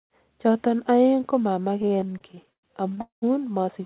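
From 1.82 to 2.99 s the speech breaks into repeated stalls (stutter). Eighteen short gaps, the longest about 103 ms, are filled with continued sound while late packets leave the jitter buffer empty. Together they stretch the passage by roughly a third of a second. On a spectrogram, smeared, repeated frames interrupt the speech, all below 4 kHz as in a narrowband G.711-style call. The waveform shows flattened, looping stretches with faded edges.

From 3.01 to 3.24 s comes a call audio freeze, likely caused by packets held up in transit. The last sound is stretched, fades, and gives way to about 130 ms of silence before the speech resumes where it stopped. The waveform shows a decaying tail and then a flat line.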